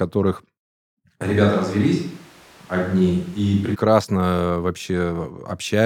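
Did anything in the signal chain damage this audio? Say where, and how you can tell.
Yes. From 1.25 s to 3.74 s the speech turns abruptly roomy and hollow, with thinner bass and a noise floor around 30 dB below the speech, at about the same level, then snaps back. This is likely a switch to a distant microphone at capture after the close mic dropped out.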